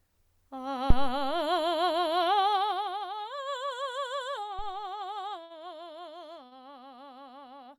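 At 0.90 to 1.40 s and again at 4.59 to 4.80 s the music is hit by a phantom power thump: a supply switched on or off on a live input drives a step through the coupling capacitors, giving a deep low thud that dies away in about 111 ms and 48 ms respectively. At 5.43 to 5.52 s and 6.46 to 6.53 s come short stalls from a late packet. The jitter buffer ran dry, so the receiver held the last sound for 66 ms and 52 ms, then resumed where it left off. No music is lost, but each moment drags, and playback sits later by that amount afterwards.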